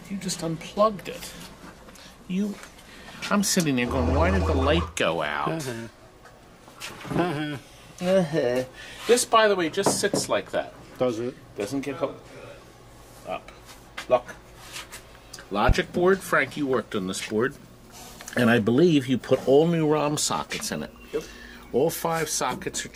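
A single loud pop cuts through the audio from about 15.69 to 15.73 s, a sharp thump lasting roughly 40 ms and peaking around 15 dB above the surrounding level. The sound continues underneath without a break. The cause is likely a sudden voltage step or spike, for example from a plug, a switch, a static discharge or a driver glitch, which was added to the signal and then shaped by the circuitry after it into a brief pulse.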